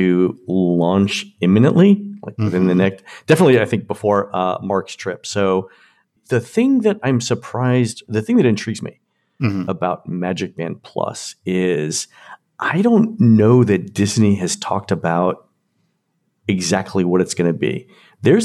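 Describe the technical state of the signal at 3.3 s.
At 3.3 s the speech signal is intact, with no audible dropout, clipping, distortion or other technical fault at that moment.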